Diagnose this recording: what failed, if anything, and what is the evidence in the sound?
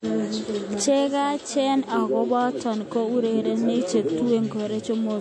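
Codec stage: the speech is cut off above 11.4 kHz throughout, with plainly audible watery swirl, likely MP3 compression at a low bitrate near 48 kbps. A plain low-pass filter would not swirl.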